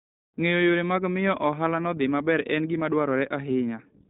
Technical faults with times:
0.00-4.10 iLBC codec

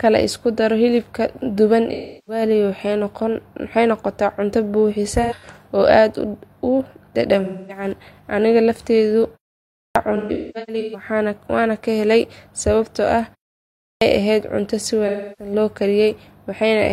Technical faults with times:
1.93-2.42 AAC frame loss with concealment
5.22-5.58 AAC frame loss with concealment
7.44-7.84 AAC frame loss with concealment
9.67-9.95 clipped start after a pause
10.16-11.08 AAC frame loss with concealment
13.71-14.01 clipped start after a pause
15.07-15.52 AAC frame loss with concealment

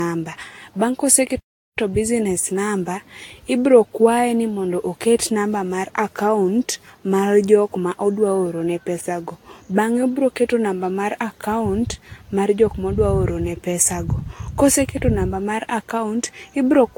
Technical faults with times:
0.00-16.98 generation loss
1.39-1.78 playback stall

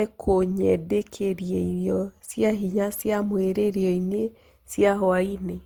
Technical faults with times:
0.00-5.65 generation loss

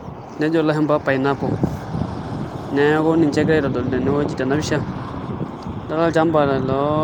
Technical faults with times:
none

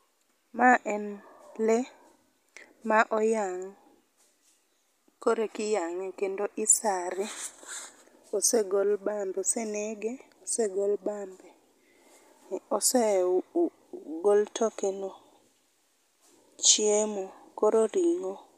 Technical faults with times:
none

